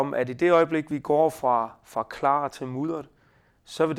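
An overlap between stream segments made the player trim speech that was never doubled. At 0.91 s, after "at i det øjeblik", 22 ms vanishes. At 2.89 s, after "fra fra klar til", 27 ms vanishes. Each waveform jump sounds like a click or tiny skip, two seconds apart.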